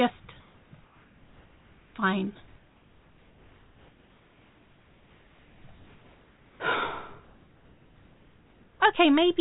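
Comfort noise in place of the background at 0.4–0.72, 0.84–1.94, 2.48–5.64, 5.74–6.6 and 7.24–8.8 s: the low background becomes steady, featureless hiss about 2 dB quieter, likely from discontinuous transmission.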